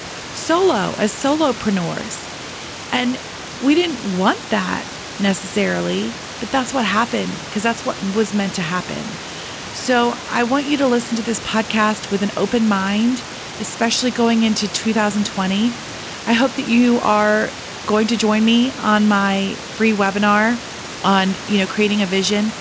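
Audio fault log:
Nothing stood out on listening to this speech recording.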